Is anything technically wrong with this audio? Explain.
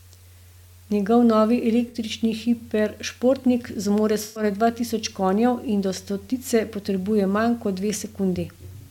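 Yes. There is AAC frame loss with concealment, twice. At 1.88 to 1.96 s, just before "hiperšportnik zmore", about 64 ms goes smeared and noisy. At 4.23 to 4.43 s, between "hiperšportnik zmore" and "dva tisoč", about 128 ms turns phasey. The decoder rebuilds each gap from the last good spectrum.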